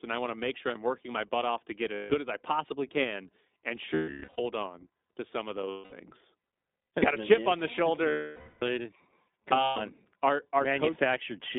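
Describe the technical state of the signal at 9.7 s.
At 9.7 s the signal sits inside a stretch of lost iLBC frames running from 9.64 to 9.77 s, about 120 ms, which fits six dropped 20 ms frames. The decoder fills the hole by repeating the last pitch cycle blended with noise and letting it fade, so the gap comes out as a held, faintly buzzy, breathy vowel. On a waveform this shows as a short run of near-identical periodic cycles shrinking in amplitude. On a spectrogram it appears as flat, unchanging harmonic bands smeared with noise before normal detail snaps back right after 9.77 s.

Underneath, the whole passage carries the iLBC codec's own plainly audible damage. Each 20 ms frame's excitation is coded on its own, and the roughness heard here fits the 15.2 kbps mode. Output is confined to roughly 250 Hz to 3.7 kHz, giving a slightly synthetic, grainy narrowband sound. A spectrogram shows an empty region above 3.7 kHz and a thin floor below 250 Hz, with blocky texture in the harmonics. 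The waveform looks band-limited, lacking fine high-frequency detail.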